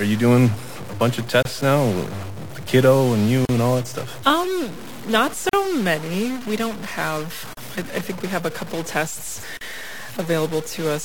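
A stuck bit runs through the whole speech clip, with noise filling the pauses. The likely cause is one data bit held at 0 or 1, so about half the sample values are off by that bit's weight, tracking the waveform.

Gaps at a join of encoded pieces open every 2 s: at 1.43 s for about 27 ms, just after "doing a bunch of", then for 40 ms each at 3.45 s, 5.49 s, 7.53 s (between "don't have" and "I I think we") and 9.57 s, just after "have a couple tests". Each 2 s piece was encoded separately and joined untrimmed, so encoder start delay and end-frame padding leave a brief silence with smeared edges before the sound resumes where it stopped.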